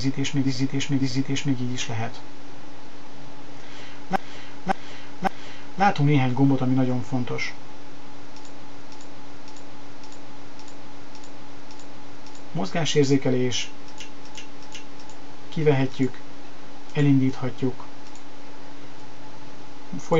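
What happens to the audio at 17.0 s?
Nothing goes wrong at 17.0 s; the audio there is intact, with no audible fault.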